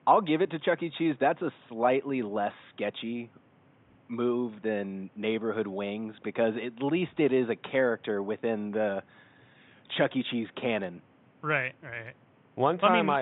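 Listening to the speech recording, nothing stood out as a technical problem, with only faint room noise sitting about 33 dB below the speech.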